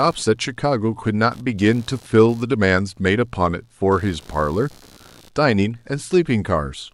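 A low buzzing chatter runs under the whole speech recording, a rapid pulsing at around 70 pulses per second that sits roughly 30 dB below the speech and drifts with its own rhythm rather than following the talker. This is computer activity noise: as the processor, graphics card or mouse change load, the current they draw disturbs the ground shared with the audio circuit, and that disturbance is picked up as interference throughout the clip.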